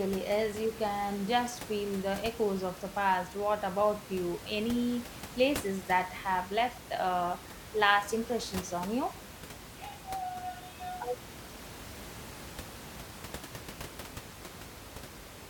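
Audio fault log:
No faults heard in this speech recording.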